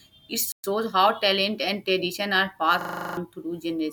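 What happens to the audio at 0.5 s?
At about 0.52 s the speech cuts out for 120 ms, a playback stall, and picks up again at 0.64 s. It sounds like a sudden hole mid-flow, most likely the player running short of data or its thread getting blocked before output resumed.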